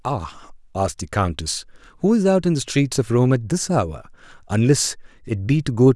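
No technical faults are audible.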